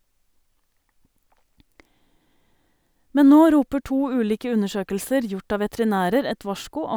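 No technical faults can be heard anywhere in the speech. Nothing in the recording stands out as needing comment at any point.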